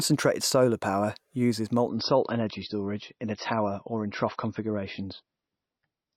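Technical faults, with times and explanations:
1.88–6.16 s, adaptive stream at a lower bitrate: right after "solar power uses", the stream switches to a much cheaper encoding, consistent with a drop from about 128 to 24 kbit/s MP3. Nothing remains above 5.9 kHz, so treble vanishes abruptly without any gap, and coding artefacts thicken.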